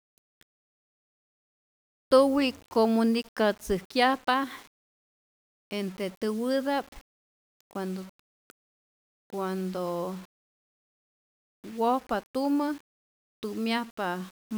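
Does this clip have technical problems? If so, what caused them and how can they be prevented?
Yes. Throughout the speech there is grainy distortion that tracks the signal: quiet tails go gritty before collapsing to silence. This is likely low bit depth without dither, roughly 7 bits with plain rounding, so the error is correlated with the signal and sits only about 30 dB below it. A zoomed waveform shows visible stair-steps, and a spectrogram shows a broadband haze that appears and vanishes with the speech. To prevent it, keep at least 16-bit resolution and apply dither whenever reducing bit depth.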